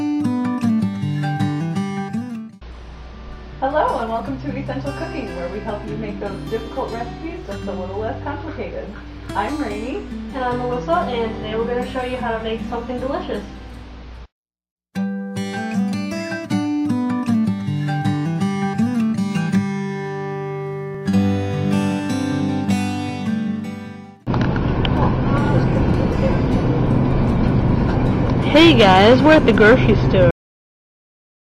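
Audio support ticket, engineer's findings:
Cut-off end at 30.31 s. Sound stops abruptly mid-event, no decay, then silence to the end. Probable component: capture or playback buffer flush at stop. Final buffers were never written or played out, truncating the tail.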